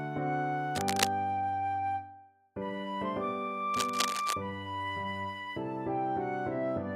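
Cable scratch noise interrupts the audio at 0.75 to 1.07 s, roughly as loud as the signal, and again at 3.74 to 4.33 s, about 5 dB lower, likely from a worn connector whose contact resistance jumps as it moves. It shows as ragged broadband smears on a spectrogram.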